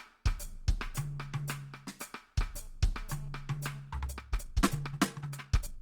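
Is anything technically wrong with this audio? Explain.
Yes, there are two faults in this music clip.

From 2.59 to 3.80 s there is GSM phone buzz. A nearby 2G phone transmits in bursts about 217 times a second, and the audio circuitry rectifies those radio pulses into an audible tone. The result is a hard, raspy 217 Hz buzz rich in harmonics, sitting about 29 dB below the music and unrelated to it. Because the phone is doing a data transfer, the buzz comes and goes.

From 3.96 s to the end, the section is time-stretched. The pace abruptly jumps to 1.79 times the original speed while the pitch stays put, so the music sounds rushed. The likely cause is software squeezing the audio to fit a shorter length, keeping pitch constant by dropping short pieces of the waveform.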